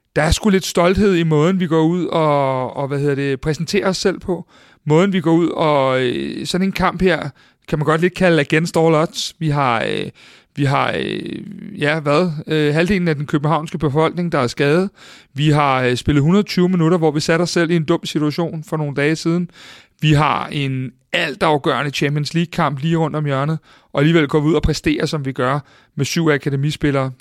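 No technical faults are audible anywhere in the speech.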